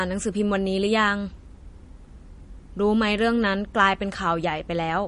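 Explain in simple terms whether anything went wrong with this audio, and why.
Throughout the speech, everything above 10.6 kHz is missing, and the quieter details swirl and flicker with a watery, metallic edge, most likely from MP3 compression. A simple treble cut would sound dull but steady; this warbling shows parts being dropped and restored.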